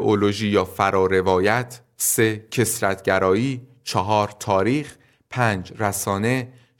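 No technical faults can be heard in the recording.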